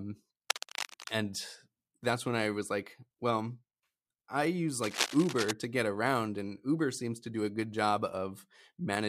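Cable scratch noise appears from 0.50 to 1.12 s, before "and that's when I", and from 4.82 to 5.51 s, between "I use" and "to get around and". Both bursts are dense, uneven rustling, about 5 dB below the speech. They likely come from a worn cable or connector being moved.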